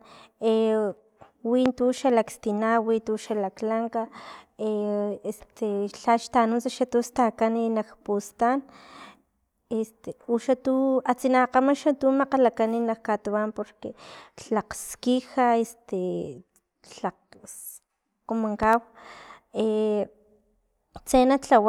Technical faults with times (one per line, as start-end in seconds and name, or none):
1.66-1.70 loud pop
18.63-18.67 loud pop